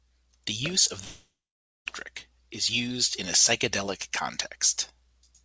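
Just after "use of", from 1.04 to 1.88 s, the last sound is stretched into a fading buzz, then about half a second of silence, and the speech resumes with roughly 0.82 s gone. This is likely a long network dropout, concealed until the receiver gave up; the band-limited G.722 call path stops at 8 kHz.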